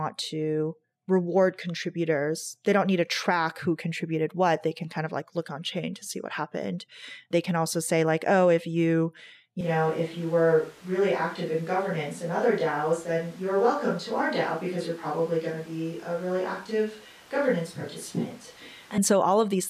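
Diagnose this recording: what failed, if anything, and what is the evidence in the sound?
The close microphone's feed was likely lost in the analogue capture chain, leaving a distant microphone. After "oh if you you", at 9.61 s, the speech turns abruptly roomy and bass-light at similar level, with room noise about 25 dB below it, until 18.98 s.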